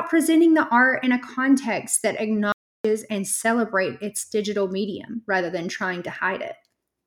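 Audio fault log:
2.52–2.85 s, audio dropout to silence: the speech cuts off after "in a context that" and returns at "and celebrates its digital", leaving a 0.32 s gap of silence with no room tone, likely from the input being lost while the recorder kept writing silence.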